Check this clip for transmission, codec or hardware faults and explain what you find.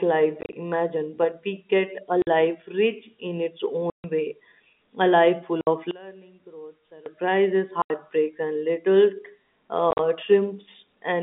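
Two faults are audible: repeated packet loss filled with silence, and a stretch where one channel seems inverted.

Packet loss filled with silence at 0.41–0.53, 2.22–2.27 (before "life rich in its"), 3.9–4.04, 5.61–5.67 (after "a life full"), 7.82–7.9 and 9.91–9.99 s: lost packets were replaced with silence, leaving hard-edged holes totalling 50 to 140 ms per event, in steps that fit 10 ms packets.

One channel inverted from 5.91 to 7.06 s, after "a life full of": the level drops about 22 dB, likely because one channel's polarity is reversed and the shared centre content cancels when the channels are summed to mono.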